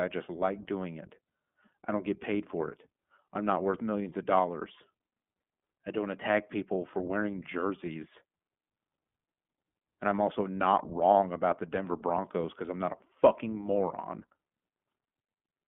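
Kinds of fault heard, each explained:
iLBC codec, throughout: The speech passes through a narrowband VoIP codec that codes each 20 ms block of excitation on its own, without drawing on the previous block. The usable band runs only from about 150 Hz to 3.5 kHz, so the sound is thin and boxy with no high-frequency air. The coding damage is plainly audible as a rough, slightly synthetic grain, and the character fits iLBC's 15.2 kbps mode.
Lost iLBC frames, 12.42 to 12.46 s: A brief dropout of about 20 ms, which points to a single lost frame, is hidden by the decoder repeating the last pitch cycle blended with noise. At 12.42 s this shows as a short, faintly buzzy, held-vowel smear instead of a clean gap. Because each iLBC frame decodes independently, the speech snaps back to normal almost immediately after 12.46 s.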